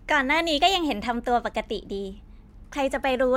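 From 0.58 s to 2.78 s the speech runs 5.34% fast and 90 cents sharp, then snaps back. This is likely a drift correction step, where clock-matching software jumped the playback rate to drain its buffer. Unlike wow, the shift is sudden and steady, not wavering.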